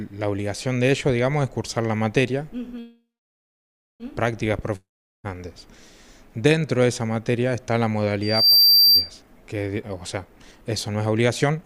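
At 2.79 s the audio stalls in a call audio freeze that lasts until 4.03 s. The last sound carries on as a fading buzz. It then drops to silence for about 0.96 s. The cause is likely packets held up in transit, leaving the jitter buffer empty. The receiver filled about 1.2 s with concealment. When the audio resumes, it picks up where it stopped. Nothing is lost, but everything after runs 1.2 s later.

From 4.76 s to 5.27 s there is a long network dropout. Again the last sound trails off into a fading hiss, and about 0.4 s of that stretch is silent. This time the audio does not resume where it stopped. Roughly 0.48 s of material is simply gone. The audio returns further along, with a jump in continuity. The cause is likely packets that never arrived at all, so the receiver could only fill the hole and move on.

At 8.22 s a loudspeaker feedback squeal begins, and it lasts until 9.11 s. It is a single piercing tone at 4.7 kHz. 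It swells over about a third of a second and peaks roughly 10 dB above the surrounding sound. A microphone is picking up its own loudspeaker. At this one frequency the loop gain exceeds one, so the tone keeps feeding itself and grows.

From 9.76 s to 11.65 s a jitter buffer speed-up takes hold. The audio plays at 120 percent speed, yet the pitch stays the same. It sounds hurried. The buffer had built up more delay than it wanted. To catch up, the receiver cut out many short pitch-period slices in a row. Around 0.4 s of material is trimmed away this way.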